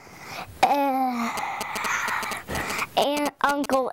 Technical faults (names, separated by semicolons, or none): GSM signalling bursts